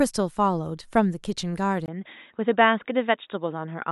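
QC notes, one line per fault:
1.86–3.92 s, input switched to a poorer device: after a 20 ms dropout the speech loses everything above 3.8 kHz and turns dull and boxy, with a faint new background noise but no level jump, likely from recording moving to a narrower-band microphone or headset call profile.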